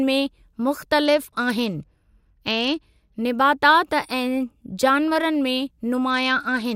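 From 1.06 to 3.18 s the speech suddenly loses its top end and turns grainy. This is a Bluetooth SBC bit pool drop. The link struggled, so the sender cut the bits per frame. The highest sub-bands got almost nothing, and the rest were quantised coarsely. The drop in quality points to a fall from a bit pool of about 28 to 12, near 96 kbps. The same dull, gritty sound returns at 6.10 s and lasts to the end.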